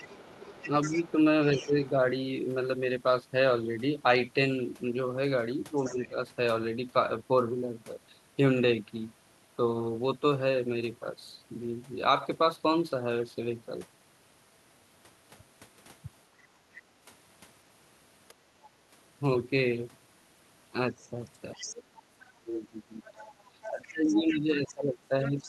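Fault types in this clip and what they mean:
other side's voice leaking through: A second, fainter voice runs under the talker, likely the far end playing on a loudspeaker and not fully removed by the echo canceller. It sits about 15 dB below the speech from the start to 1.91 s and from 21.53 s to the end, about 20 dB down at 5.76–6.08 s, and is only a brief scrap near 18.6 s. Unlike room reverberation, which is the talker's own voice trailing off, this is a separate voice.
speech suppressed in double talk: The talker's level drops while the leaked voice is present, likely because the echo canceller could not separate the two and turned both down. Short dips of about 5 dB fall between 0.68 and 1.76 s, a deeper one of about 10 dB at 5.87–6.18 s, and from 22.34 s to the end the drops reach about 25 dB. Compressor pumping follows the talker's own loudness. These dips instead line up with the other voice.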